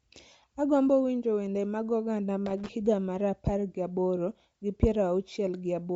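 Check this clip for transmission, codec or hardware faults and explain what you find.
Two faults are present: a codec-related dulling throughout and a short burst of connector crackle.

Throughout the speech, nothing is heard above 7.7 kHz, and consonants carry a grainy, breathy edge with plainly audible codec damage. This is likely Bluetooth LC3 compression: the low bitrate forces the codec to zero the upper spectrum and patch it with noise. The effect fits roughly 32 kbps with 10 ms frames.

From 2.46 to 2.69 s, an irregular scratchy crackle breaks into the sound. This is loose connector crackle: a worn or dirty contact rapidly made and broke the circuit, chopping the signal into fragments.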